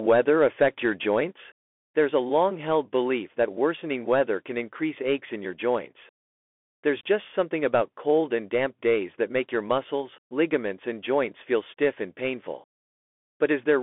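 The speech has passed through a Bluetooth CVSD headset codec, which codes each sample as a single up-or-down step, which fits a 64 kbps link. From start to end the band is held to about 250 Hz to 3.5 kHz with nothing above 3.8 kHz, and s sounds turn scratchy and a granular hiss sits underneath.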